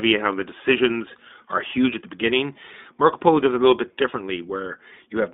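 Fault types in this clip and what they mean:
iLBC codec: The speech sounds thin and boxed-in, with nothing audible below about 200 Hz or above 3.6 kHz, and it carries a plainly audible rough, slightly synthetic buzz throughout. This is the iLBC narrowband VoIP codec, which codes the excitation of each 20 ms frame independently of the previous one. The coarse, frame-by-frame rebuilding of the signal causes the graininess, and the strength of the damage points to the 15.2 kbps mode.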